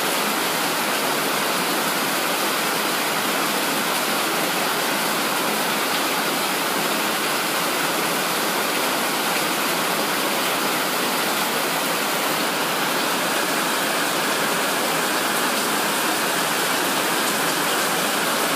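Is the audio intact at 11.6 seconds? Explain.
Yes, the audio at 11.6 seconds is intact, with no dropout, click, distortion or other fault to be heard at that moment.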